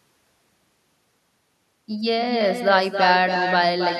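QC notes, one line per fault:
throughout: echo with no canceller. Far-end speaker pickup returns speech roughly 300 ms later, about 6 dB down; waveform shows a smaller delayed copy trailing each burst.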